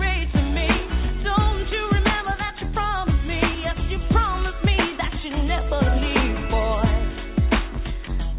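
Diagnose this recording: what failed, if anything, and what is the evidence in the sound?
Nothing failed in this recording.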